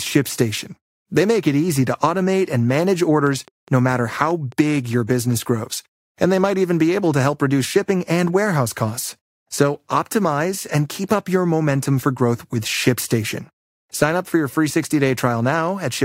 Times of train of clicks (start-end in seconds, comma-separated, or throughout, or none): 3.27-5.34